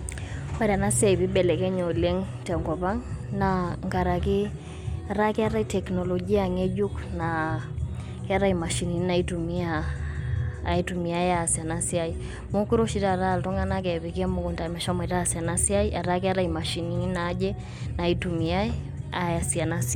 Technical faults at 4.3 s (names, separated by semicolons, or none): none